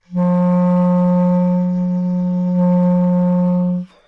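There are no technical faults to describe in this recording.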